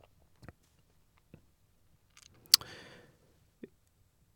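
No audible faults anywhere in the speech recording.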